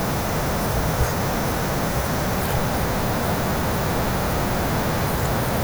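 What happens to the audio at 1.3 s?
Low bit depth with noise shaping is present at 1.3 s, as it is across the whole of this speech clip. The signal is held to about 6 bits, and the rounding error from that coarse quantisation is fed back and pushed toward high frequencies. At 1.3 s this is heard as a steady, thin hiss rising sharply toward the top of the band, sitting only about 10 dB below the speech.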